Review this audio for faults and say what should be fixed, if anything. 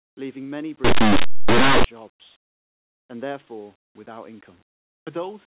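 From 0.84 to 1.84 s the speech becomes harsh, very loud distortion: linear audio read as companded. Plain 8-bit samples are expanded as mu-law codes, so values just one side of zero turn maximal. The waveform shows a loud one-second slab; the spectrogram, a broadband smear. Label the encoding with the data so linear 8-bit samples never pass through a mu-law expander.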